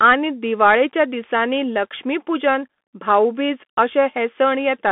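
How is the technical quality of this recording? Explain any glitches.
The recording is poor. The speech has been through a Bluetooth CVSD headset codec for its whole length.

Throughout the clip, the speech is confined to roughly 200 Hz to 3.5 kHz, and nothing sounds above 3.8 kHz; the stream runs at 64 kbps. CVSD encodes each sample as a single up-or-down bit with an adapting step size, so the damage is plainly audible: s sounds turn scratchy and a granular hiss sits under the speech. That grit is what tells it apart from a clean telephone-band filter, which would only sound muffled.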